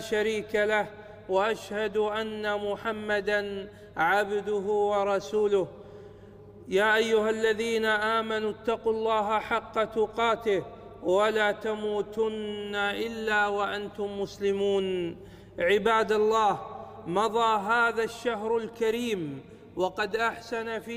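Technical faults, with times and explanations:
No technical faults can be heard anywhere in this recording.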